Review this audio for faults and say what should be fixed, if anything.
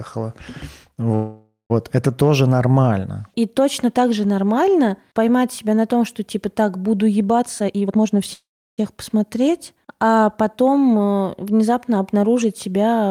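There are two call audio freezes, at 1.15 to 1.72 s and 8.33 to 8.80 s. The sound stalls and the last bit gets stretched into a fading buzz. The first goes silent for its final 0.14 s and the second goes silent for about 0.34 s. Then the audio picks up exactly where it stopped, so nothing's lost, but the delay grows by 0.55 s and 0.45 s. That's likely packets held up in the network, draining the jitter buffer. To prevent it, give the jitter buffer more headroom, or fix whatever on the route is bunching packets.

Right after "что типа так буду" there's a jitter buffer speed-up from 7.38 to 8.15 s. The receiver sheds the backlog by snipping out pitch-period slices, around 0.4 s in all, so the speech runs at 156% speed at the same pitch and sounds rushed. To prevent it, cap the catch-up rate so the buffer drains more gently over a longer stretch.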